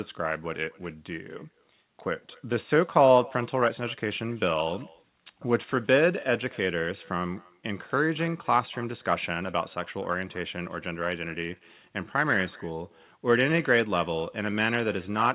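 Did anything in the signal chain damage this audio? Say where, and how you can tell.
Yes, at the call-processing stage: echo with no canceller runs through the whole clip. A faint copy of the speech, about 25 dB down, trails it by around a fifth of a second. The far end's loudspeaker feeds its microphone, and nothing subtracts that return before it comes back.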